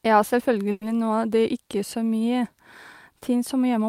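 Call audio freeze at 0.71 to 0.83 s: the speech stalls, its last sound stretched into a fading buzz for 100 ms, then resumes exactly where it stopped, nothing lost but everything after 100 ms late. Packets were likely delayed in transit, draining the jitter buffer.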